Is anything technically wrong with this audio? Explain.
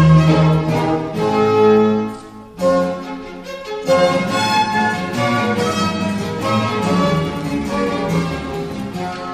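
No, nothing is technically wrong with this audio.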